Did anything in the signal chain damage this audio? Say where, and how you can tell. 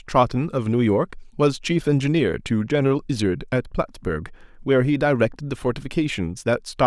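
No, nothing in the signal chain audibly damaged this speech recording. No stage between capture and playback leaves a mark that can be heard.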